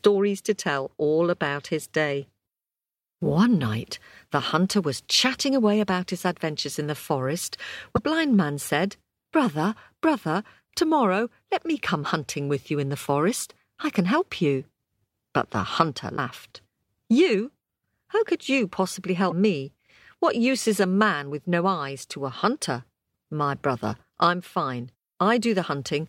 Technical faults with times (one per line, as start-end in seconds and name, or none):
7.96-7.99 damaged data in a compressed stream
16.13-16.19 damaged data in a compressed stream
19.27-19.32 damaged data in a compressed stream